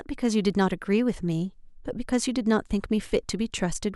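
Nothing stood out on listening to this speech recording.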